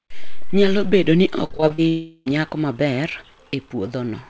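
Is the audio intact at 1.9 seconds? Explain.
No. From 1.88 to 2.28 s, about 0.4 s of the speech is missing, and this is likely a long network dropout. The receiver fills the whole gap by stretching the last received sound into a synthetic buzz that decays rather than cutting to silence. Speech resumes at 2.28 s, but the lost section is not recovered. The concealed stretch keeps the same 8 kHz upper limit as the rest of the call audio.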